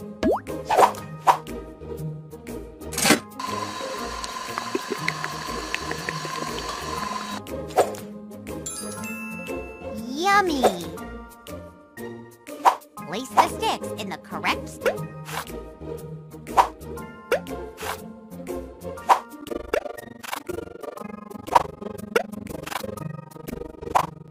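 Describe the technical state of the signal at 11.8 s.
At 11.8 s the signal is intact, with no dropout, distortion, glitch or other audible fault at that point.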